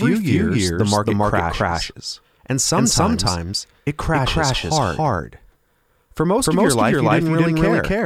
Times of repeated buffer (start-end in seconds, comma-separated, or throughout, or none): none